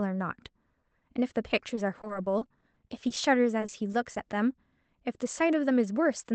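Speech carried over a WebRTC call path, with repeated packet loss (robotic sound) from 1.75 to 3.18 s and again from 3.60 to 4.17 s. Packets kept arriving lost or late, and each short hole, none longer than 30 ms, was patched by stretching the preceding sound, so roughly a sixth of each stretch is concealed. The speech turns choppy, with fragments missing, over an Opus-style band limit near 8 kHz.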